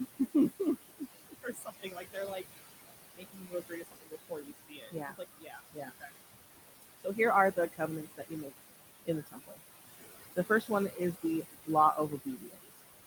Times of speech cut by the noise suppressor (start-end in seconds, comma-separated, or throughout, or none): 0.89-2.59, 3.14-6.15, 6.82-7.19, 7.56-8.58, 9.05-9.60, 10.36-12.80